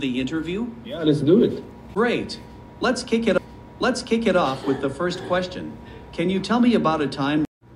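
At 3.38 s a blip marks a jump back, and just under a second of audio, up to 4.37 s, plays again. This is a stream segment repeated: the player fetched or queued the same segment twice, splicing a duplicate into the playback.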